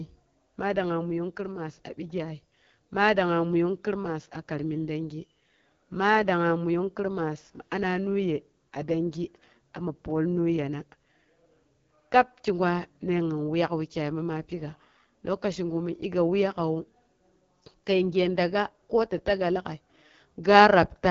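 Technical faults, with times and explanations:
Throughout: AMR wideband (HD Voice) codec at a low rate, fitting 8.85 kbit/s, cuts everything above 7.1 kHz and models the speech coarsely, leaving it rough and raspy.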